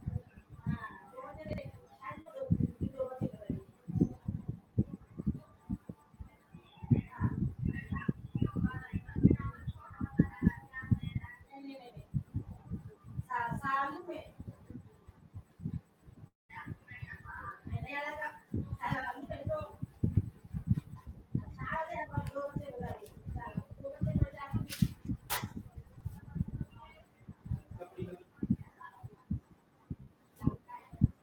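At 1.49 to 1.58 s, chunks out of order: a 46 ms chunk of the speech was written one chunk late, so it plays after its successor and leaves a brief jumbled stretch. The same fault returns at 25.87 to 26.01 s, with the chunk two places late.

At 2.21 to 2.27 s, short concealed packet loss: 40 ms never reached the decoder, and the receiver bridged the gap by extending the preceding sound, heard as a brief smear. At 30.03 to 30.10 s, another 40 ms is lost and concealed, with the fill stretching the timing by a few milliseconds.

At 16.27 to 16.51 s, a continuation of the last sound fades into about 160 ms of silence before the speech resumes with 220 ms gone, likely a long network dropout.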